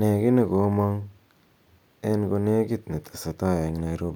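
Speech recording with no technical faults heard.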